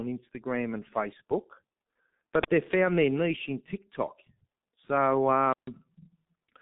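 Throughout, the speech shows heavy G.723.1 codec damage: nothing above 3.8 kHz, and slow voice modelling that fits about 6.3 kbit/s leaves it muffled and hoarse.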